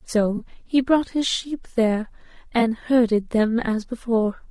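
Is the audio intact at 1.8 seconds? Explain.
No. Low-delay AAC compression runs through the whole clip, so 1.8 s carries it like every other moment. The damage is plainly audible: the speech sounds rough and grainy, with noise filling the gaps between harmonics and a thin, artificial-sounding top band. This is likely AAC-ELD, whose short frames resolve voice harmonics poorly and spend bits inefficiently. At a rate that fits about 32 kbps, that leaves audible coding noise.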